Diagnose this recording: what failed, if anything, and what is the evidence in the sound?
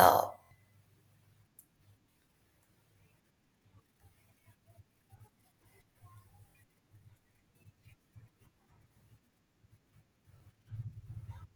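The driver or buffer stage ran dry and replayed its last block. These repeated buffer stutters, with hard-joined 23 ms repeats at 0.44–0.51, 2.11–2.16, 5.18–5.20, 6.50–6.55, 8.64–8.66 and 10.38–10.40 s, fit a 1024-sample buffer.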